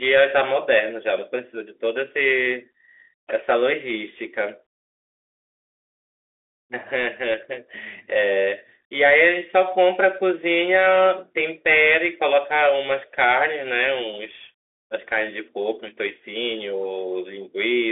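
The speech is carried through a Bluetooth CVSD headset codec for its whole length. Nothing reaches above 3.8 kHz, leaving a 300 Hz to 3.5 kHz telephone band that fits a 64 kbps link. The one-bit delta encoder's step lags fast high-energy transients, so sibilants rasp and a granular hiss sits underneath.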